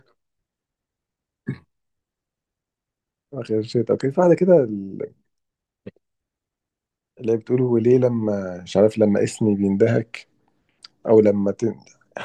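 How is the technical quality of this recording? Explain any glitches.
No glitches are audible anywhere in the recording, so there is nothing to explain.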